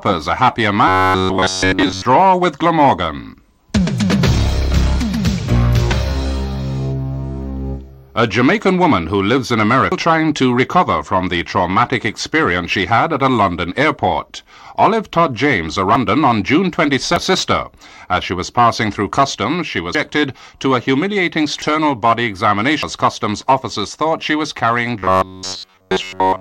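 From 0.88 to 2.05 s, robotic sound from repeated short buffers turns the audio into a rigid metallic buzz at 93.8 Hz. This is likely a playback loop repeating roughly 11 ms buffers. On a spectrogram it shows as evenly spaced horizontal harmonic lines.

Compressed frames are skipped at 5.92, 9.92, 15.95, 17.16, 19.95, 21.62 and 22.83 s. Each time the audio jumps ahead by a half-second or more of 92.9 ms frames.

The robotic buzz returns from 24.99 s to the end, now continuous.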